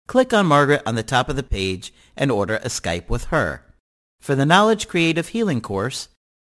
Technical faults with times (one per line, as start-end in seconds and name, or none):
0.00-6.40 aliasing